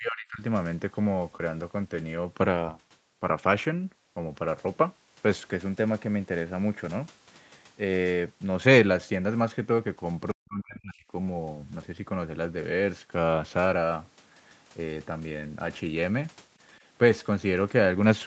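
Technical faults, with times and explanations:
0.00–0.42 s and 10.32–11.06 s, speech suppressed in double talk: the speech sinks by roughly 30 dB, then roughly 40 dB, for about 0.4 s, then about 0.7 s. The likely cause is an echo canceller that could not separate the near-end talker from the loudspeaker echo and attenuated both.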